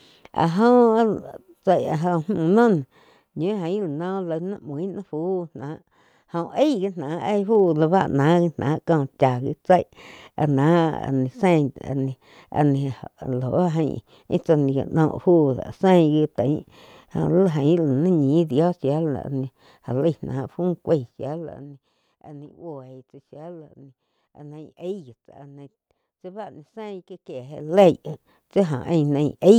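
A fine ticking zips across the speech from 7.13 to 7.72 s as the level rises about 10 dB, again from 20.86 to 22.02 s as it falls about 20 dB, and from 27.31 to 27.90 s rising about 20 dB. This zipper noise comes from gain moving in unsmoothed 1 dB jumps, roughly twenty a second, each leaving a small click.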